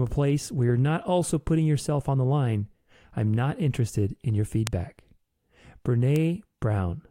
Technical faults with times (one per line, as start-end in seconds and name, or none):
4.67 bit error spike
6.16 bit error spike